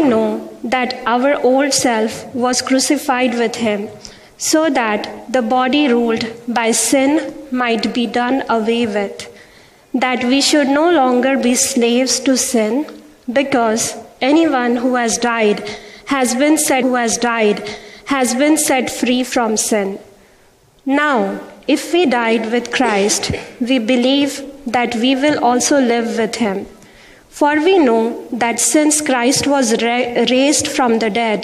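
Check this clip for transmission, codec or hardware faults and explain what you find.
There is one transmission fault, a stream segment repeated. From 16.81 s to 18.81 s, about 2.0 s of audio that has just played is heard again, with a small blip where playback jumps back. The player fetched or queued the same segment twice, so the programme runs 2.0 s longer than it should. A buffering stall would leave silence or a freeze, and a stutter would loop a few milliseconds rapidly. This repeats an entire two-second stretch once.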